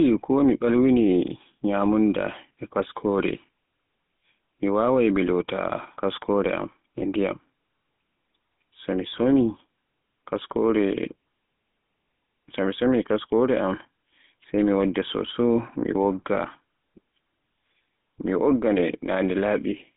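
From start to finish the speech has gone through a GSM full-rate codec, with the line band running roughly 150 Hz to 3.5 kHz. The excitation is rebuilt from sparse regular pulses, giving that plainly buzzy, gravelly edge, which fits the old 13 kbps mobile codec.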